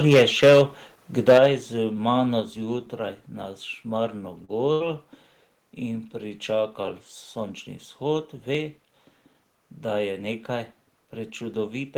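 The microphone input was likely set too high from 0.06 to 0.62 s, so peaks ran about 8 dB past the converter's limit and the tops were sheared off, giving a harsh crackle. At 0.14 s the input volume was likely stepped down by software, dropping the level by about 2 dB. The same microphone overload likely returns from 1.28 to 1.46 s with heavier clipping, and at 1.38 s the microphone volume is likely stepped down again, this time by about 7 dB. A third step of about 2 dB likely follows at 2.40 s. At 2.56 s, audio goes missing between chunks, likely because a few milliseconds are lost at a buffer handover, which fits 3-second chunks. The two sides are butted together, producing a tiny skip or click. From 4.45 to 4.50 s, roughly 40 ms of short concealed packet loss is patched by extending the preceding sound, heard as a brief smear before the real audio blends back. From 4.72 to 4.82 s, a burst of packet loss removes about 80 ms. 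The receiver holds the last sound and fades it out, leaving a decaying buzz or hiss before the sound resumes further along. The same audio missing between chunks recurs at 8.55 and 11.54 s as two more small skips.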